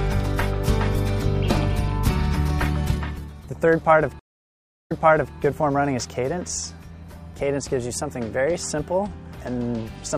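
A stream reconnect breaks the audio at 4.19 s: the connection dropped, playback went silent for 0.69 s, and a fresh decoder restarted mid-stream. Sound resumes 0.47 s earlier than where it stopped, so a short stretch repeats, with the event ending by 5.36 s.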